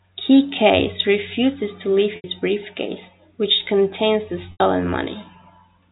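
At 2.16 to 2.24 s and again at 4.52 to 4.60 s, the speech breaks up with packet loss with pitch repetition. Each gap is 80 ms, which fits four 20 ms packets. The receiver fills the hole by repeating the last pitch period, giving a brief held, buzzy tone that fades to silence within about 50 ms before the speech resumes through a short cross-fade. The telephone-band G.711 coding carries through both dropouts.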